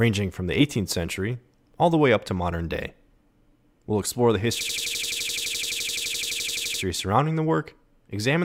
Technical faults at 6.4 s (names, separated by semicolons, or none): system hang loop